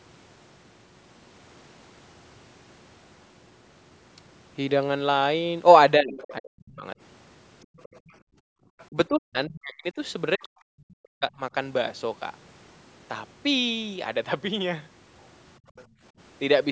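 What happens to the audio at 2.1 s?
Nothing goes wrong at 2.1 s: the speech runs on intact, with only the ordinary band-limiting of call microphone processing, which trims the lowest bass and leaves nothing above 8 kHz.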